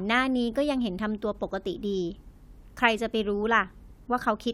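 Speech recording with nothing technically wrong with it.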